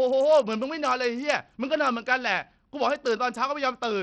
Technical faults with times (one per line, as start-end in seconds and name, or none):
0.00-4.03 Bluetooth SBC compression